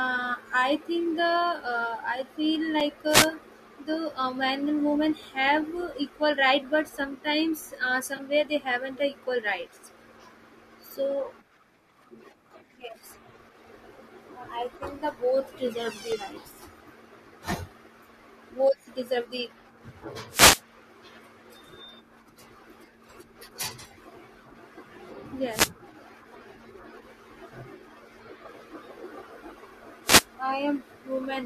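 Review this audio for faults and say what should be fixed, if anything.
Two blocks of digital silence cut the speech at 2.80 s and 16.12 s. The first is a hole of about 4.35 ms. The second is 1.45 ms, which fits a 64-sample buffer going unfilled. Each drops abruptly to silence and back, leaving a tick or dip. Prevent it by enlarging the audio buffer or raising the processing thread's priority so output is always delivered on time.

Wireless microphone noise hits appear at 3.07–3.29 s, 20.29–20.62 s, 25.50–25.71 s and 30.04–30.25 s. Each is a brief swish of static rising over the speech as the FM signal fades from reflection cancellation. Prevent it with diversity receivers, better antenna placement and a clear line of sight to the transmitter.

AAC frame loss with concealment produces a 20 ms smeared patch at 8.17–8.20 s. This fits two lost frames, which the decoder filled in from the preceding spectrum. 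Prevent it with a more reliable transport, error protection or retransmission on the streaming link.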